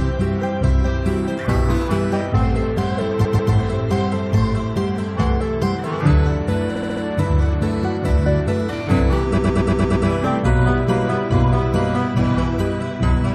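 Repeated frames at 3.24–3.52 s, 6.75–7.02 s and 9.37–10.07 s: blocks of 139, 70 and 116 ms replay two, four and six extra times, stuttering and lengthening the audio.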